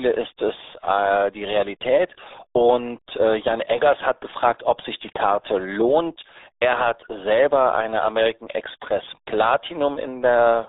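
RealAudio 14.4 codec damage runs through the whole speech clip: a narrow band of roughly 300 Hz to 3.7 kHz, nothing above 3.8 kHz, and heavy gargly, muffled smearing. All of this fits an 8 kbit/s dial-up-era speech coder discarding detail to meet its tiny bit budget.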